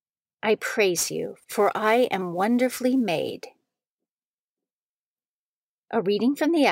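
A speech recording with a gritty hiss riding on the voice from 0.97 to 4.71 s, strongest on loud and bright sounds and gone in pauses. This is sample clock jitter: timing wobble of several microseconds leaves an error roughly 25 dB below the signal.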